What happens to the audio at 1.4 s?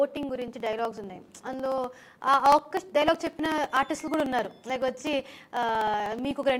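At 1.4 s the audio sits inside a run of periodic USB or driver dropouts lasting from 0.11 to 6.50 s. Every 62 ms a blocked bus or driver skips a few milliseconds of samples outright, producing regular ticks while signal plays. A waveform shows small splices at steady intervals, and a spectrogram shows a row of evenly spaced thin vertical lines.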